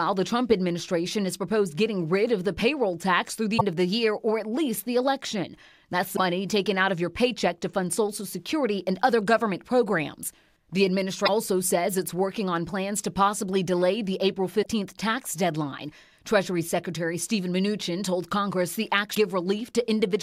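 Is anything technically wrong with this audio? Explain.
Yes. Five short glitches break through the sound at 3.54 s, 6.13 s, 11.22 s, 14.59 s and 19.11 s, each lasting roughly 50 to 70 ms. These are damaged data in a compressed stream. At each point, part of the encoded data was lost or overwritten, so the decoder misreads those frames, loses its place, and scans ahead for the next valid frame header. The garbled frames come out as a brief chirp, squawk, click or hole before decoding recovers.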